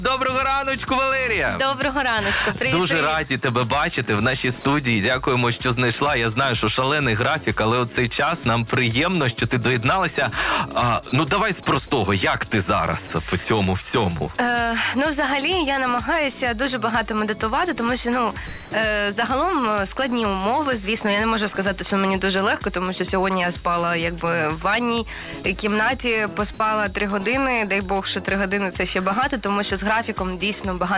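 The sound briefly drops out to steady comfort noise at 4.61–4.64, 13.07–13.10, 18.47–18.71 and 26.54–26.60 s, likely sound dropped by the voice detector over this band-limited G.711 call path.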